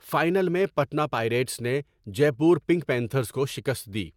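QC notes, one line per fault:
Throughout: generation loss. The speech sounds swirly and hollow, with a smeared, watery texture and softened consonant attacks. Nothing is heard above 17 kHz. The likely cause is lossy encoding repeated a few times, in a way that fits AAC-LC at around 96 kbit/s. Each new pass quantises again on a shifted frame grid. Quantisation noise and spectral holes therefore pile up beyond what one encode at that rate would leave, and transients blur.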